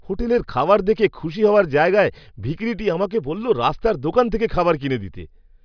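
No technical faults occur anywhere in the speech, so there is nothing to place in time order.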